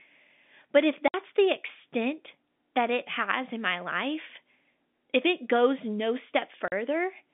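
Telephone speech, band-limited to roughly 200 Hz to 3.6 kHz by G.711 coding. It has two dropouts from packet loss filled with silence. The holes run from 1.08 to 1.14 s and from 6.68 to 6.72 s, lasting 60 and 40 ms. That fits three and two lost 20 ms packets. Each gap starts and stops abruptly.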